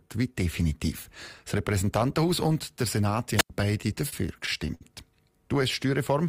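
Speech, with two faults. At 3.35–3.50 s a wireless microphone squelch dropout occurs: the analogue FM radio link faded until the receiver's squelch shut the output. A short rise of hiss gives way to a hole of near silence lasting about 92 ms before the voice comes back. From 3.81 to 4.83 s there are repeated stalls (stutter): packets arrived late, so the jitter buffer kept running dry and the receiver stretched the last sound to cover each wait. Six such stalls, the longest 60 ms, add about 132 ms of filled-in audio, roughly 13% of that stretch, with nothing actually lost. The result is speech that drags and stutters.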